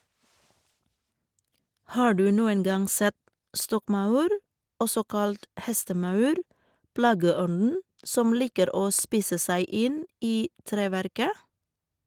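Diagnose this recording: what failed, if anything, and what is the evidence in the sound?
Nothing failed in this speech recording; no stage in the chain shows a fault. The Opus voice compression is audible working as intended in hybrid mode at about 20 kbps, keeping the full band up to about 20.4 kHz with only light coding traces.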